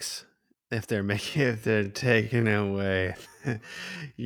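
From 1.26 s to the end, the speech slows to half speed while pitch holds: a time-stretched section, likely from repeating short pieces. It drags.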